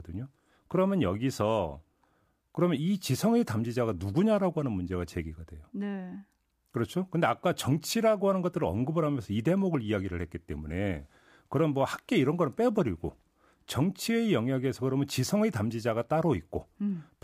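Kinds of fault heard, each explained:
Sample clock jitter: a faint hiss and roughness riding on the speech, strongest on loud and bright sounds, gone in pauses; the converter clock wanders around a microsecond, leaving error about 45 dB down.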